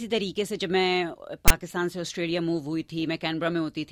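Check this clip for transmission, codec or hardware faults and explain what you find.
There's one fault here: file tags played as audio, from 1.48 to 1.50 s. A block of text metadata got read as though it were samples, so you hear a brief, hard-edged burst of loud rasp, its waveform pushed off to one side of zero rather than centred.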